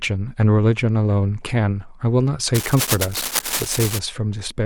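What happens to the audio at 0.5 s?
Nothing goes wrong at 0.5 s: the speech there plays through intact, with no dropout, click, distortion or other fault.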